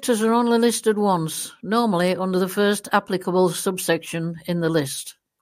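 A short speech recording with no technical faults to report at any point in the signal.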